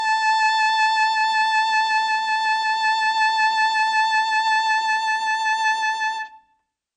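From start to finish the music has nothing above about 9.1 kHz, so the top end sounds dull. That fits low-bitrate audio saved at a high bitrate: likely an MP3 around 48 kbit/s re-encoded far higher, which can't bring back the missing highs.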